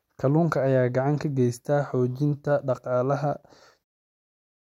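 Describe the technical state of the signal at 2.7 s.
At 2.7 s the speech signal is intact, with no technical fault to be heard at that moment.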